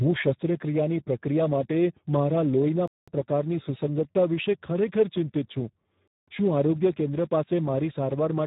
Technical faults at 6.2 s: Speex codec; gap between chunks

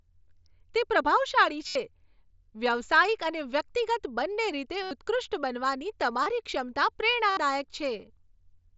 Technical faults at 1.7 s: concealed Bluetooth headset packet loss

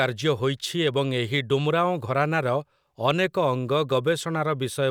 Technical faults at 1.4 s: none

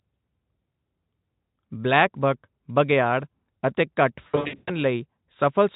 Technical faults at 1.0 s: none

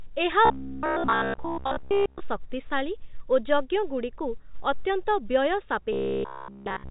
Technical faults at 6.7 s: robotic sound from repeated short buffers

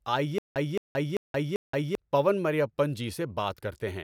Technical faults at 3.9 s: none

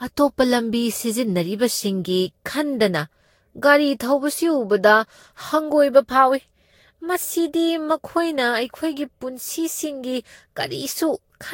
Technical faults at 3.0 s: generation loss

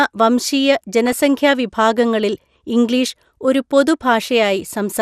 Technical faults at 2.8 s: MP2 compression

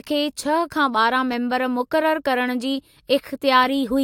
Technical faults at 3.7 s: none

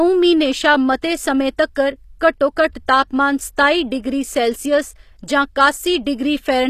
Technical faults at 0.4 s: HE-AAC compression

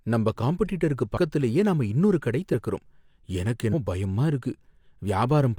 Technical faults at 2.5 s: compressed frames skipped

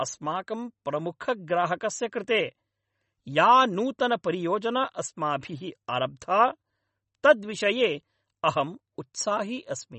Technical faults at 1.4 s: MP3 compression

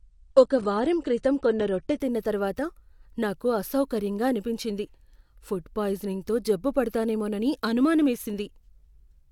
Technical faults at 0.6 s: adaptive stream starting at a low bitrate

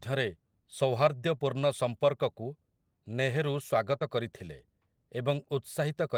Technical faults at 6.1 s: none

